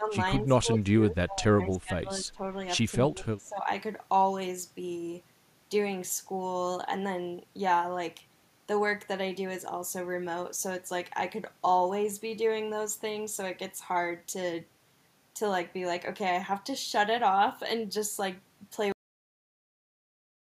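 From the start to 0.13 s, again from 0.43 to 2.59 s, and from 3.11 to 3.66 s, the speech dips in level and thins out, sinking by roughly 10 dB at first and then as much as about 20 to 25 dB. This is likely speech suppressed in double talk: with both sides talking at once, the echo canceller could not tell this talker from loudspeaker echo and attenuated everything.

Between 0.75 and 0.82 s, within that suppressed stretch, a faint delayed copy of the voice slips through, lagging by 231 ms and sitting about 30 dB below the speech. It is likely an echo leak, where one side's loudspeaker sound reached its microphone and the canceller failed to remove it before sending it back.

At 18.92 s the audio stops dead in the middle of a sound and drops straight to digital silence, with no natural decay. This is a cut-off end: the final buffers were never written out, so the recording simply ends where the data ran out.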